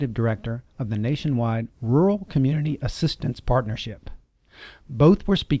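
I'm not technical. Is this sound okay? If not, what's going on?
Yes, nothing in this audio points to a technical fault, so there's nothing to fix.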